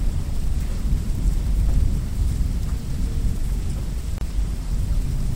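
At 4.18 s there is a gap at a join of encoded pieces. The audio was encoded in separate sections and stitched together without trimming, so the encoder's start-up delay and the padding of the previous section's final frame both stayed in. The result is a break of about 31 ms, lasting until 4.21 s, where the continuous sound drops out. The codec softens its edges, and the sound then resumes from where it left off.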